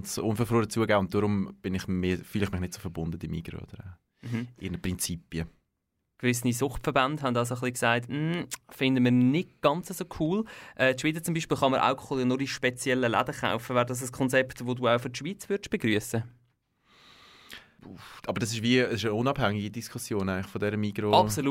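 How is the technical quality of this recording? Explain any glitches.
The technical quality of this recording is sound, with no glitches to explain.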